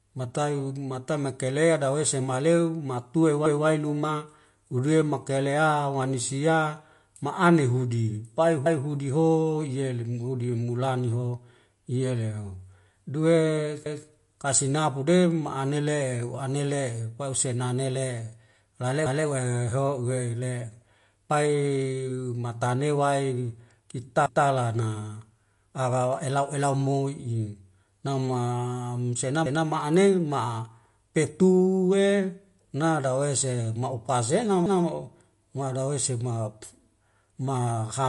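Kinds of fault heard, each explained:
MP3 compression: The whole clip has plainly audible codec damage and nothing above about 11.3 kHz, which fits a low-bitrate encode near 48 kbps. The likely cause is MP3, where the encoder drops weak frequency lines frame by frame and cuts the top end.
Overlapping chunks: Each new chunk starts before the previous one finishes, so 200 ms replays at every join. You hear a stutter every 5.2 s, at 3.46, 8.66, 13.86, 19.06, 24.26, 29.46 and 34.66 s, including just before "luma hule" and just after "la le".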